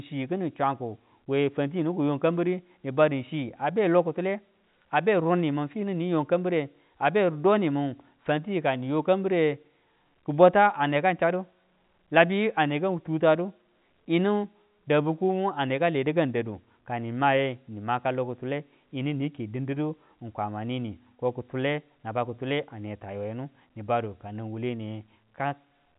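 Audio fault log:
No faults heard.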